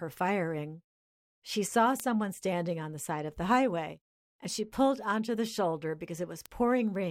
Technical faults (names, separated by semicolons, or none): word clock ticks